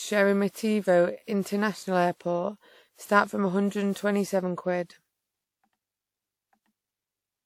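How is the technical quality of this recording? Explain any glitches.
The quality's been worn down by generation loss, and it runs through the whole recording. The speech has a swirly, smeared, hollow character, with consonant attacks blurred and softened. That's more damage than a single pass at a decent bitrate would leave. It likely comes from the audio being decoded and re-encoded about seven times through a lossy codec, something like WMA at around 96 kbit/s. Each pass re-quantises on a shifted frame grid, so the noise and spectral holes keep stacking up.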